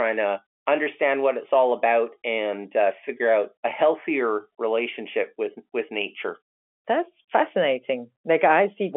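This speech clip has nothing technically wrong with it.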